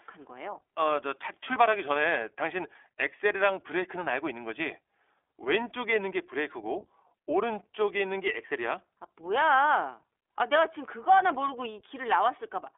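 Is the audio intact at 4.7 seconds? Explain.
No, iLBC codec damage runs throughout: each 20 ms frame is coded independently, leaving speech rough and synthetic, unlike a plain telephone filter, with nothing above 3.7 kHz.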